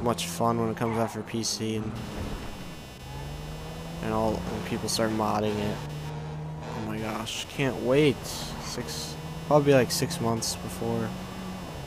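From 1.96 s to the end of the audio, a buzzing, chirping layer sits under the sound, pulsing at roughly 300 Hz and about 20 dB below the signal. It does not follow the sound itself. This is computer activity noise. Shifting load on the processor, graphics card or mouse disturbs the ground that the audio circuit shares with the computer, so the machine's own workload leaks into the recording as this interference.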